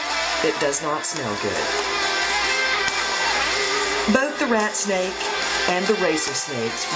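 No technical faults can be heard anywhere in the audio. There is nothing in it that calls for a time or a cause.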